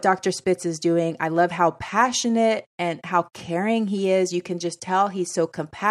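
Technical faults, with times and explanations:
Nothing stood out as a problem on listening to this speech recording.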